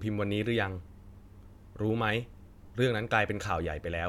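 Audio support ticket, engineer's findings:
No faults heard; audio path appears normal.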